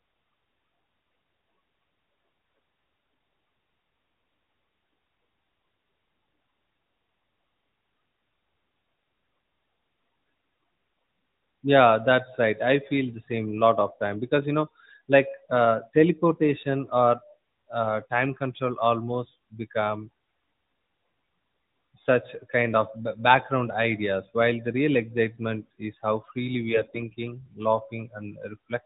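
From 26.69 to 27.01 s, right after "excitement is how freely", AMR bit errors turn the speech hoarse and gargly, which fits a run of around fifteen corrupted frames over the light, band-limited AMR-NB sound. Flipped low-priority bits misplace excitation pulses and skew fine gain and spectral values. Unlike packet loss, there is no gap or muting, and pitch and level hold.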